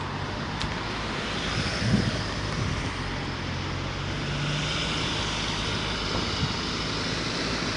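A recording of everyday sounds carries plainly audible damage from start to finish, with a rough, hissy halo and a smeared, underwater quality, likely Nellymoser compression. Its 256-sample blocks appear as grainy, blurred texture, with noise-filled patches where weak bands got no bits. Everything stops dead above 10.6 kHz, consistent with a stream around 44 kbps.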